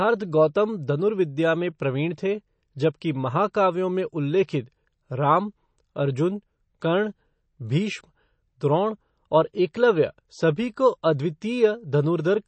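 Throughout, the speech sounds plainly watery, with nothing above 8.4 kHz. This is likely MP3 compression, which fits a bitrate around 32 kbps, dropping weak frequency lines.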